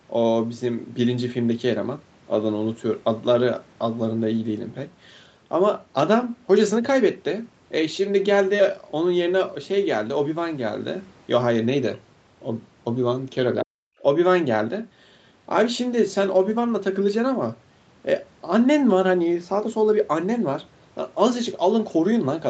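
From 13.62 to 14.04 s the speech drops out by about 40 dB, likely speech suppressed in double talk, with the echo canceller ducking the talker along with the echo.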